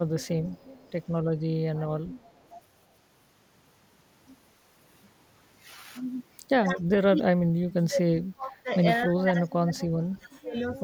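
From 0.5 to 1.07 s and again from 2.18 to 2.5 s there's an echo leak: a faint copy of the speech trails about 272 ms behind, very low, most likely a speakerphone whose echo canceller let some through. Then from 6.8 to 8.84 s and from 9.06 to 10.83 s the talker gets pushed down hard, deepest drops around 35 dB. That's speech suppressed in double talk, likely the canceller ducking everything while the other side was talking too.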